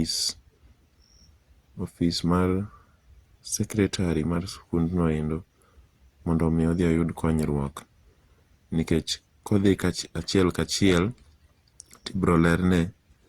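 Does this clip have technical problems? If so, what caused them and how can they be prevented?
Yes: throughout, the speech sounds swirly, smeared and hollow, with blurred attacks, likely generation loss from about seven re-encodes through an Opus chain near 64 kbit/s. Prevent it by keeping a lossless master and encoding only once.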